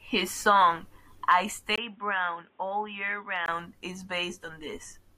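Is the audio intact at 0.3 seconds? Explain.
Yes, the speech at 0.3 seconds is intact, with no fault heard at that moment.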